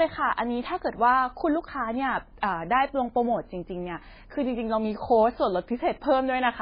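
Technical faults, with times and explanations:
Throughout: MP3 compression, likely encoded at a bitrate as low as 16 kbps. Nothing remains above 5 kHz, so the speech sounds dull and muffled. Weak frequency lines flicker on and off between frames, giving heavy watery, swirling artefacts.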